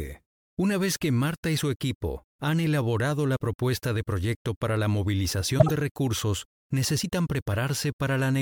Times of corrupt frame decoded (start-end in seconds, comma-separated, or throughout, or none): 5.58-5.71